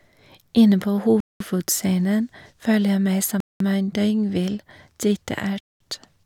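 Gap between chunks at 1.20–1.40 s, 3.40–3.60 s and 5.60–5.80 s: 200 ms silences every 2 s interrupt the speech at the chunk joins.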